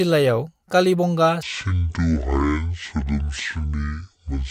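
From 1.43 s onward, a section at the wrong speed plays at 0.525x, likely from a clock mismatch: speech sinks about ten semitones, and spectrogram harmonics crowd lower.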